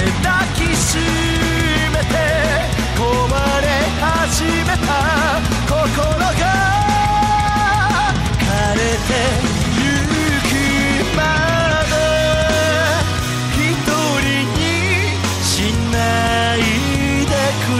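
Sample clock jitter runs through the first 6.1 seconds of the audio, from the very start until 6.10 s. The converter's clock seems to be wobbling by a few microseconds, so each sample lands a touch early or late. That timing error bites hardest where the waveform moves fastest, so you get a gritty hiss riding on the loud, bright parts, something like 25 dB below the signal, that drops away whenever the sound goes quiet.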